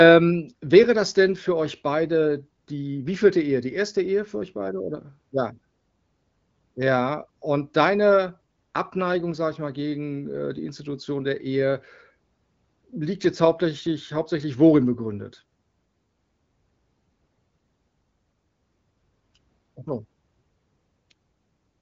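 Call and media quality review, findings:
No fault found: speech band-limited with nothing above 7.7 kHz and only light coding texture, consistent with the AMR wideband (HD Voice) codec at a mid-to-high rate such as 15.85 kbit/s.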